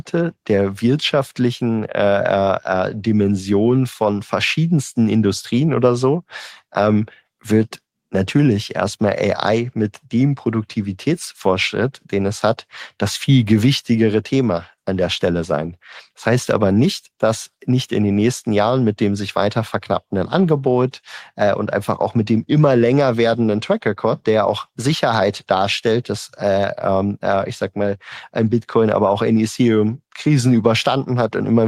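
No technical faults are audible anywhere in the speech.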